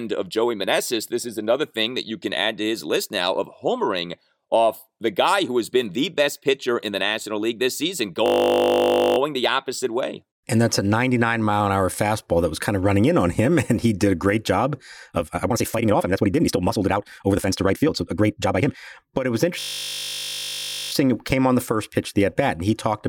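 At 8.26 s, after "this season", a system hang loop sets in: the driver stalled while the sound hardware kept replaying one 20 ms slice of its ring buffer. That slice repeats until 9.18 s, heard as a steady 50 Hz buzz, and the sound resumes with "the opposite way" with essentially nothing missing. From 15.02 s, after "did a great job", a time-stretched section runs to 18.76 s. It was likely produced by software compressing the audio to fit a length, dropping short pieces to keep the pitch. The speech suddenly runs about 1.71 times faster at unchanged pitch and sounds rushed. A second system hang loop starts at 19.60 s, after "it was". A 20 ms buffer slice cycles until 20.92 s, again giving a 50 Hz buzz, and the audio then continues without any appreciable loss.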